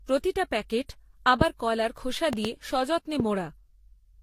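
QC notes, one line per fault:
Throughout: transcoding between lossy codecs. The audio was most likely encoded lossily more than once, with each later encoder spending bits on the earlier encoder's damage while adding its own. The mixed artefacts point to a Vorbis, then HE-AAC, then Vorbis chain at roughly 40 to 44 kbit/s. The lowest cut-off survives every pass, so nothing is left above 16.3 kHz.
2.33 to 2.47 s and 3.20 to 3.22 s: loud pop. A sudden voltage step or pulse, likely from a plug, switch, static discharge or driver glitch, entered the signal, and the stages after it shaped the pulse into an audible pop. Just after "কলার খোসা" there are two pops in quick succession, and a single one follows at 3.20 s. Each peaks about 15 dB above the speech, which continues underneath.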